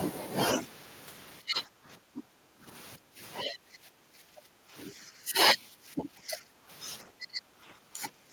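In this speech recording the level of the talker repeatedly sinks and recovers in five stretches: 1.41 to 2.68 s, 2.97 to 3.19 s, 3.43 to 5.37 s, 5.58 to 6.70 s, and 7.04 s to the end at 8.32 s. The deepest dips reach roughly 20 dB in the first stretch and 10 to 15 dB in the others. This is likely speech suppressed in double talk, where an echo canceller mistakes overlapping far-end audio for echo and attenuates the near-end talker along with it.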